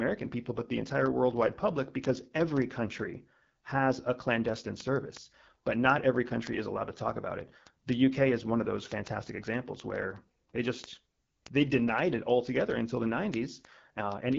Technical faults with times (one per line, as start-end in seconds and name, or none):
0.00-14.38 AMR wideband (HD Voice) codec